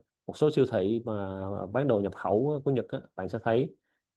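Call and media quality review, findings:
No faults found.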